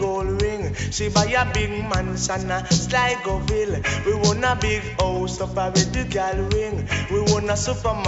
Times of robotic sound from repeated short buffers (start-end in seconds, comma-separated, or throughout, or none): none